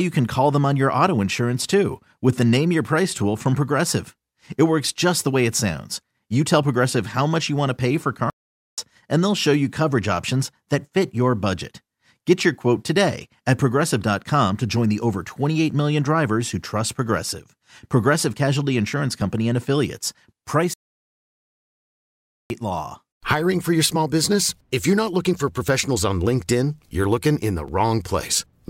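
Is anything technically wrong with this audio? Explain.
Yes. Playback stalls at 8.30 to 8.78 s and 20.74 to 22.50 s cut the speech to silence for about 0.48 s and 1.77 s, likely because the player ran short of data, before it resumes.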